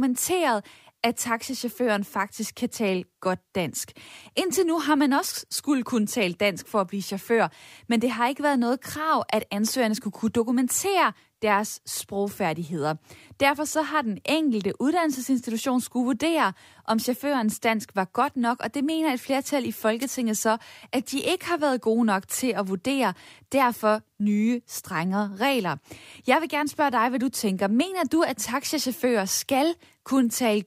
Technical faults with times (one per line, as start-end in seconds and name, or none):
20.00-20.05 wireless microphone noise hit